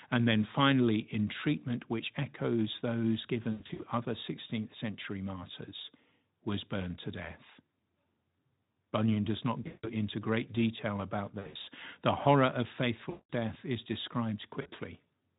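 A speech recording over a Speex link loses packets in five bursts, and the decoder conceals each gap by stretching the last sound into a buzzy tone or a coloured noise that fades: at 3.51 to 3.83 s after "treatment which echoes those", 9.63 to 9.88 s between "does not" and "into great detail about", 11.39 to 11.69 s, 13.09 to 13.30 s between "horror of" and "death is", and 14.61 to 14.69 s.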